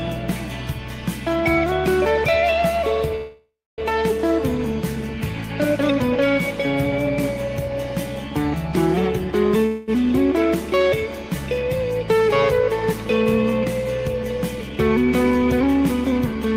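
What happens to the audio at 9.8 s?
From 9.66 to 9.91 s the sound stalls and the last moment is stretched into a fading buzz for about 218 ms. Then it resumes where it stopped, with nothing lost but everything after running 218 ms later. This is a call audio freeze, likely from delayed packets emptying the jitter buffer.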